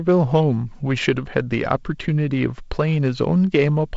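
No faults: the speech carries G.722 wideband telephone coding with nothing above 7.7 kHz, a light hiss in the upper band and a slightly noisier lower band consistent with the 48 kbit/s mode.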